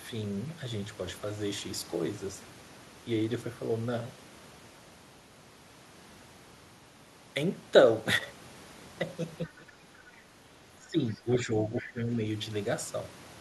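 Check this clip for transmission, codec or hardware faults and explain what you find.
Two echo-canceller faults show up in the last few seconds of this speech, where the near talker and the far side overlap.

Speech suppressed in double talk, from 9.45 to 10.08 s, 10.77 to 11.52 s and 11.81 to 12.09 s: the talker's level sinks by roughly 15 to 20 dB in pieces. The likely cause is the canceller treating overlapping talk as echo and attenuating everything. Packet-loss dropouts cut out abruptly, but these dips track the overlap.

The other side's voice leaks through at 10.1 to 10.2 s, 11.14 to 11.22 s and 11.75 to 11.89 s. Short scraps of a second voice can be heard, faint in the first two and louder in the third, about 15 dB below the talker. This is likely loudspeaker echo that the canceller failed to remove. Unlike room reverb, these scraps are a separate voice rather than a smeared copy of the talker.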